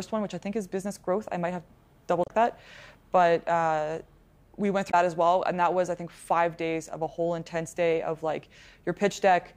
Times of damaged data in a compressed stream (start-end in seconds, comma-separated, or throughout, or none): 2.23-2.30, 4.87-4.94